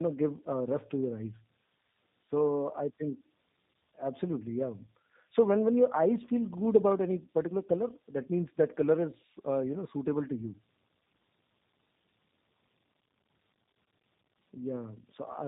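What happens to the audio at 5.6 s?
At 5.6 s the speech carries tandem speech coding, present across the whole clip rather than starting there. It passed through two speech codecs in a row, AMR-NB and then G.729A with G.711 between them, so the second coder re-encoded the first one's artefacts. The result sounds rough, muffled and warbly. A spectrogram shows nothing above 3.8 kHz and blurred, unsteady harmonics, and the waveform looks smoothed and lacks sharp transients.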